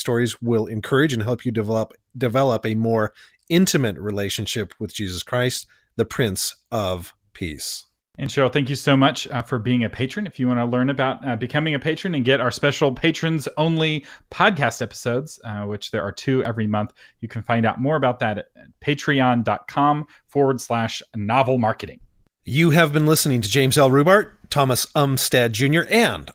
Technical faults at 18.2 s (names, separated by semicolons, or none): none